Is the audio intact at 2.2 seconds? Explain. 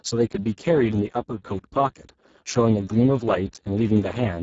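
No. At 2.2 seconds, as across the whole speech clip, the audio carries heavy Speex codec damage, with a starved excitation that points to a bitrate near 6 kbps. With so few bits to model the vocal source, the voice turns hoarse, noisy and edging toward robotic. On a spectrogram, harmonics look smeared and grainy, the band above 4 kHz is a diffuse noise-like wash rather than structured detail, and nothing appears above 7.7 kHz.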